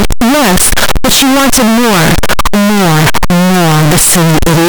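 From start to finish the speech is buried in very loud, harsh distortion, quiet moments as loud as the rest, likely from signed and unsigned 8-bit samples mixed up, flipping the top bit.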